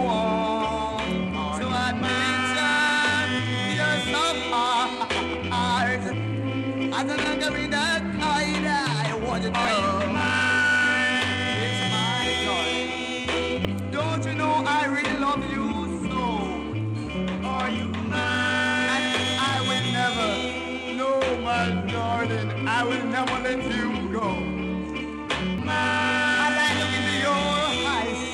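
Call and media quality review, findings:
Damaged data in the compressed stream: brief blips at 9.65, 13.65 and 25.58 s. Corrupt frames trip the decoder, which loses sync and hunts for the next frame header.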